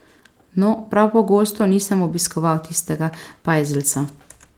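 No technical faults are audible; the speech has passed through Opus voice compression at 24 kbps in hybrid mode, fullband with content up to about 20 kHz, leaving only light coding damage.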